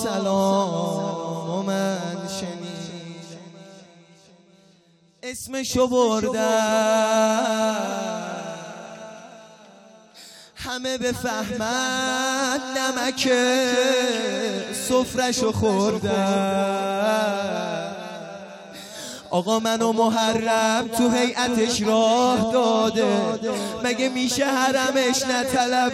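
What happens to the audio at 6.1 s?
Nothing goes wrong at 6.1 s; the audio plays through that moment intact, with no dropout, click or distortion.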